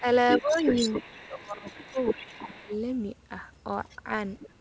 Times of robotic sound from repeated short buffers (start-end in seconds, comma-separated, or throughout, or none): none